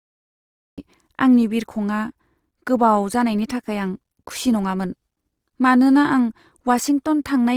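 Speech clip, and two things jump out. Right from the top it's digital silence until 0.78 s, then the audio cuts in mid-sound with no natural attack, just before "आंनि बिरखंआ". That's a classic cut-off start: the recording or stream simply began late. All the way through, the speech has a plainly audible grainy, rough, noisy texture rather than swirly holes, while the bandwidth stays full, reaching up to about 20.2 kHz. That's likely Opus compression in its music mode at a low bitrate, consistent with around 24 kbps, filling starved bands with folded or noisy content.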